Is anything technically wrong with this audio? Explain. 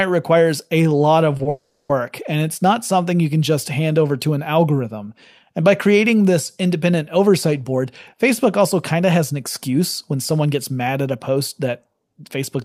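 Yes, this speech clip has delay-related faults in the call path.

Short stalls from a late packet occur at 1.37 to 1.41 s and again at 1.43 to 1.47 s. Each time, a packet missed its slot, so the receiver held the last sound for 20 ms until it arrived. Nothing is lost, but a sound lingers briefly. On a spectrogram, the harmonics run flat for a sliver of time.

A call audio freeze follows from 1.49 to 1.91 s, with playback resuming 400 ms later than before. The likely cause is packets held up in transit that drained the jitter buffer. The final sound decays into a fading buzz or hiss and then 110 ms of silence. The waveform shows a tapering tail and a flat gap.

A jitter buffer speed-up runs from 7.64 s to 12.57 s. To shed the built-up delay, the receiver repeatedly trimmed tiny pitch-period slices, about a third of a second in total. This makes the speech about 106% fast at unchanged pitch and slightly hurried. 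On a spectrogram, the syllables look compressed in time while the harmonic spacing stays the same.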